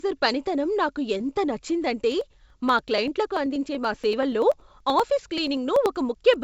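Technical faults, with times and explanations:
1.18 to 1.21 s, short concealed packet loss: About 20 ms of audio failed to reach the decoder in time, and the receiver extrapolated roughly 16 ms from the preceding sound before crossfading back into the real signal. The result is a brief smeared, wobbling patch rather than a gap. The band above 8 kHz is absent throughout, which fits a G.722 call path, so the concealment blends into an already band-limited signal.
2.12 to 6.34 s, periodic USB or driver dropouts: Every 96 ms a few milliseconds of audio are skipped, so the waveform jumps straight from one point to a later one. Each jump produces a tick or pop, repeated about fifty times at a steady rate of roughly ten per second. The evenly spaced timing points to a background task repeatedly stalling the USB bus or audio driver. The ticks are audible only while there is sound and vanish in pauses.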